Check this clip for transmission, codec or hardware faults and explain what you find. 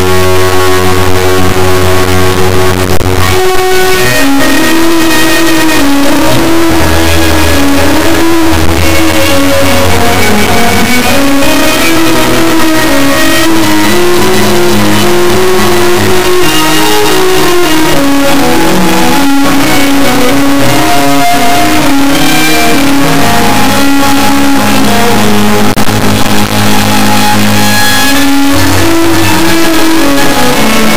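One fault runs through the whole clip: integer read as float. The audio is a harsh, extremely loud buzzing square wave that falls to silence in the very quietest moments. The 32-bit integer samples are read as 32-bit floats, so their bit patterns become near-zero, invalid or hugely oversized values, and the output slams between silence and the clipping limit.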